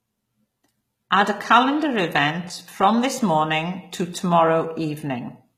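From start to finish, the speech carries plainly audible codec damage. It is likely HE-AAC compression. Only the lower spectrum is coded directly. The treble is rebuilt by copying lower bands upward and shaping them with a coarse envelope. So the top end sounds bright but not genuine. Its harmonics fail to line up with those below. S sounds turn gritty and metallic. Nothing remains above 14.9 kHz. The damage fits a very low bitrate, around 20 kbps.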